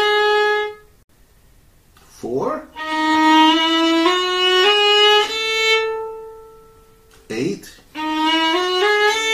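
A gap at a join of encoded pieces opens at 1.03 s, about 66 ms of silence where separately encoded pieces were joined with their untrimmed padding, before the sound resumes.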